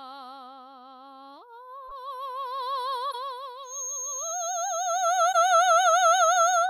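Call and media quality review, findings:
Corrupt frame decoded, music. Short squeaky blips at 1.88 to 1.92 s, 3.11 to 3.15 s and 5.32 to 5.35 s, each about 40 ms. Decoder component. Damaged compressed frames played without concealment. Misread gains and codes put energy at wrong frequencies. Each burst spans a few frames. Bursts grow louder: about -30 dBFS, then about -25 dBFS, then about -15 dBFS. Suggests bit errors in transport reaching the decoder unchecked.

Feedback whistle. Thin steady 6.5 kHz tone from 3.62 s to the end. Sits roughly 10 dB below the music, swelling and fading slowly in level. Likely an acoustic loop from loudspeaker to microphone held just at the edge of feedback. One frequency rings on without running away. Check speaker-to-mic coupling and echo cancellation or gain at the capture end.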